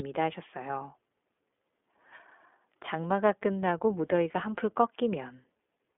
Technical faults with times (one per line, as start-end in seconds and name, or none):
0.00-5.98 iLBC codec